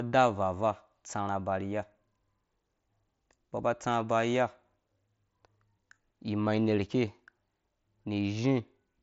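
No faults found; the speech comes through a Bluetooth mSBC headset link, band-limited to about 8 kHz, with only that codec's light graininess on louder passages.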